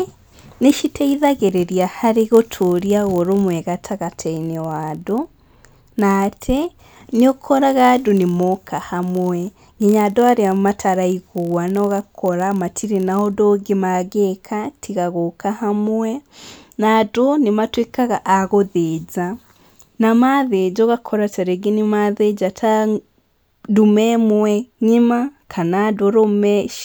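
From 0 to 13.36 s, before "ũngĩ mangĩka tiga gũka", a block size mismatch (padded) zero-fills each block end, producing a 43.1 Hz buzz consistent with 1024-sample reads.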